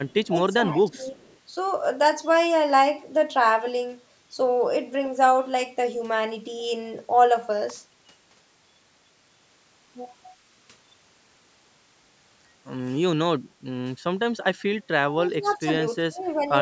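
Echo leak at 0.09 to 0.28 s: a faint copy of the speech arrives 330 ms late, roughly 35 dB down, likely because a loudspeaker's echo canceller let its microphone pickup through. Speech suppressed in double talk at 0.31 to 0.39 s: the level dips by about 10 dB, likely because an echo canceller confused the talker with echo while both sides spoke and turned everything down. The same suppression returns at 0.58 to 1.19 s, with the sound dropping by about 15 dB. The echo leak recurs at 1.26 to 1.38 s, again 330 ms behind and about 35 dB down. An electrical switching spike at 7.70 s is a sharp snap on top of the audio, likely a nearby switch or discharge arcing into the line. Speech suppressed in double talk returns at 15.1 to 15.69 s with dips of about 15 dB. Inside that stretch, at 15.43 to 15.53 s, the echo leak returns as a 330 ms delayed copy about 40 dB down. The last suppression, at 16.07 to 16.51 s, cuts the sound by about 20 dB. 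Nothing is heard above 8 kHz, from the call's microphone processing.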